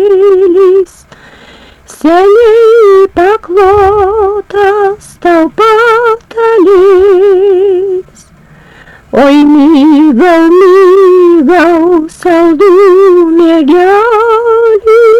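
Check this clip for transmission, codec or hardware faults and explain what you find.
One fault runs through the whole clip: hard clipping. A stage is driven about 1 dB past its limit, flattening peaks on roughly a fifth of samples and adding high harmonics heard as crackly roughness on louder moments.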